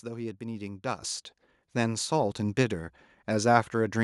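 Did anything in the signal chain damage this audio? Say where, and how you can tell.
Yes. At about 1.02 s the microphone volume stepped up: the whole signal jumps by about 8 dB in one go, and the background rises just as much as the speech. That tells you it's a call-processing stage, not anything acoustic. The software judged the mic too quiet and raised the device's input volume, so everything after that point arrives hotter. It's a single clean step, with no gradual ramp.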